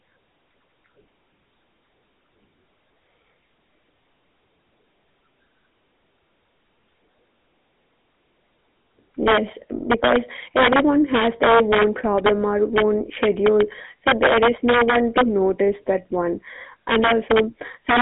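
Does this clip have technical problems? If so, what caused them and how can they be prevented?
Yes. Throughout, the speech carries GSM full-rate codec damage: a buzzy, gravelly roughness from pulse-driven vocal-tract modelling, consistent with a 13 kbps GSM link. A spectrogram shows energy only between about 200 Hz and 3.6 kHz, with nothing above 3.8 kHz. Prevent it by recording or transmitting over a wideband path instead of a GSM call.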